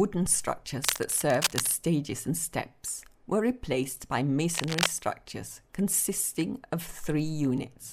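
From 0.84 to 1.72 s, a burst of cable scratch noise rasps over the sound, a little quieter than it. A second burst follows from 4.54 to 4.87 s, about as loud as the sound. A worn connector being moved is the likely cause.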